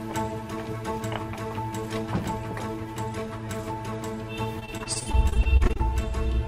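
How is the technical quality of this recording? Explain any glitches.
Repeated packet loss (robotic sound) affects the recording from 4.59 to 5.81 s. Over that stretch the stream keeps dropping or delaying packets, and each hole is bridged by stretching out the last sound received. The dropouts come in quick succession, each no longer than about 29 ms, and the patching covers about a quarter of the span. The audio turns choppy, with small pieces audibly missing.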